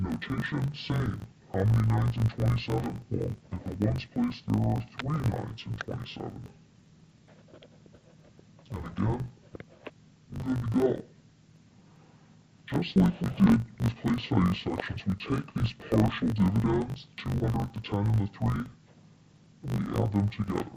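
Throughout the clip, interleaved audio is read as planar. Each 20 ms block's alternating left and right samples are split into halves and played together at half speed. The sound drops an octave, turns dull and robotic, and buzzes at 50 Hz.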